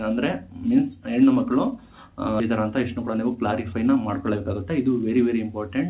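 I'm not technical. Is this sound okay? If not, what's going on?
No. At about 2.4 s the sound suddenly jumps forward, as if a short piece were cut out and the two ends glued together with no pause. This is a skip ahead: some of the audio, roughly seven tenths of a second of it, was thrown away before it could play, because newer audio was already queued behind it. Whatever was in that stretch is simply gone, and playback carries on from the later point.

Right after that, from about 2.60 s to 4.80 s, the sound runs slightly fast, around 7% quicker than normal, and may feel a little rushed, though its pitch stays the same. This is a jitter buffer speed-up. The receiving end was holding more audio in its waiting area than it wanted, so it trimmed many tiny slivers, about a seventh of a second in all, to catch back up to real time. The narrow, telephone-like tone throughout, with nothing above 4 kHz, comes from the call connection itself.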